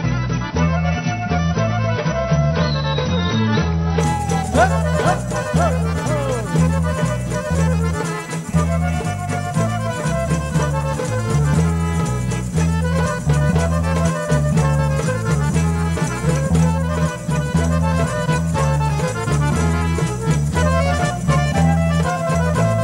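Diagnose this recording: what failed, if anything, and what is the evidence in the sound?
The fault sits at the network and codec stage: an adaptive stream starting at a low bitrate. For the first 4.0 seconds the player streamed a low-quality rendition while it measured the connection, and nothing is present above 6 kHz, with heavier codec artefacts, which fits AAC at around 24 kbit/s. At 4.0 s it switched to a better rendition, plausibly near 96 kbit/s, so the treble returns abruptly with no gap in the audio.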